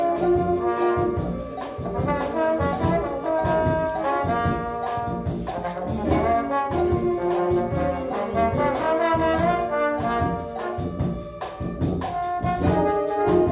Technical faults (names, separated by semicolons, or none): none